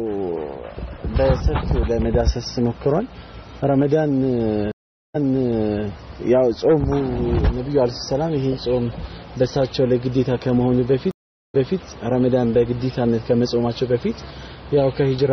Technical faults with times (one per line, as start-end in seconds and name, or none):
4.72-5.84 stream reconnect
11.11-11.77 stream reconnect